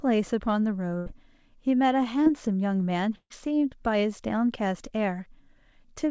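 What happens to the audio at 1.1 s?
A burst of packet loss runs from 0.98 to 1.08 s, ending just before 1.1 s. For about a tenth of a second the incoming packets never arrived in time, so the receiver stretched out the last sound it had and let it fade, filling roughly 80 ms with that smeared, dying continuation. The speech then picks up again with about 80 ms skipped, giving a small jump at the join, heard through the call's G.722 band limit at 8 kHz.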